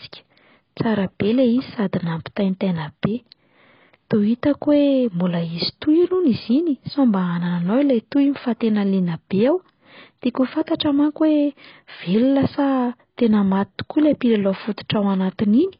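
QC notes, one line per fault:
Throughout: AAC compression. The audio is dull, smeared and fizzy, with nothing above 5.1 kHz. The likely cause is a heavy AAC-LC encode, which fits about 16 kbps.
10.67 s: pre-echo. A 12 ms hiss comes just before "manko hoe". The codec spreads noise from that sharp onset into the quiet moment ahead of it.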